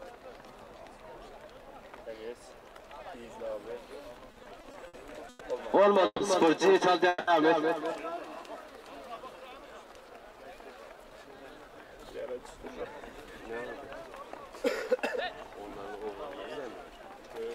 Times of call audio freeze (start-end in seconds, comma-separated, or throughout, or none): 6.06-6.22, 7.08-7.29